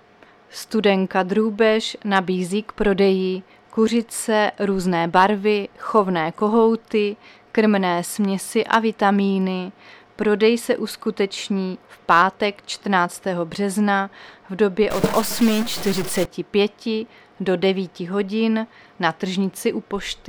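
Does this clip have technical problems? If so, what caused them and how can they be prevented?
Yes. From 14.90 to 16.25 s the audio turns harsh and buzzy, and the quiet stretches fill with noise rather than falling silent. This is likely a stuck bit: one data bit held at a fixed value by a faulty line or converter, so roughly half the samples are shifted by that bit's weight, a step of about -25 dBFS, in a waveform-dependent pattern. Checking converter wiring and running bit-pattern tests on the data path prevents it.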